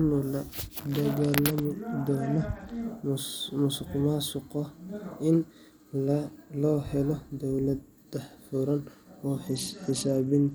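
From 1.17 to 2.83 s, and again from 9.47 s to the end of the speech, a Bluetooth SBC bit pool drop dulls the treble and leaves a gritty noise under the voice. The link starved the encoder of bits, which suggests a fall from a bit pool near 31 to about 11, or roughly 83 kbps. Unlike a lowpass filter, the loss brings quantisation grit, and it clears once the rate recovers.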